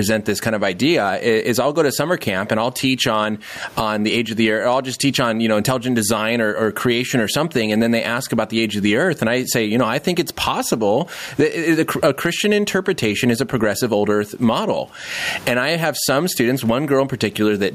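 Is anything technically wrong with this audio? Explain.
Yes. Throughout the speech there is gain pumping: the gain swings by around 15 dB, pulled down under each loud syllable, with the room noise about 42 dB below the speech. The likely cause is microphone gain set far too high, with a fast limiter clamping every peak.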